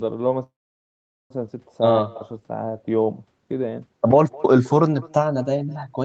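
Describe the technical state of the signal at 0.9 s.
At 0.9 s the sound has stopped: a short buzz carrying on the last sound fades into near silence lasting most of the span from 0.43 to 1.32 s. This is a call audio freeze, likely from delayed packets emptying the jitter buffer, with the audio resuming afterward where it left off, so nothing is lost but an 870 ms gap is inserted.

Around this moment, any speech is followed by a fainter, thinner copy about a fifth of a second later, at about 23 dB below the speech. This is echo with no canceller: the far end's loudspeaker feeds its microphone, and the sound returns over the network unremoved.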